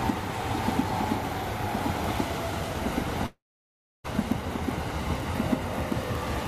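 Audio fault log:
throughout: block size mismatch (padded). Each block arriving is slightly shorter than the 1024-sample reads downstream, which fits a 44.1 kHz stream, so a brief zero gap lands in every block, giving a 43.1 Hz buzz. Playback slows only to 0.999x.
3.26–4.08 s: long network dropout, likely from a stall in the incoming stream. The receiver spends about 801 ms concealing the gap, its substitute sound decaying into silence for roughly 650 ms. Some 600 ms of audio is lost outright, and playback resumes about a fifth of a second later than before.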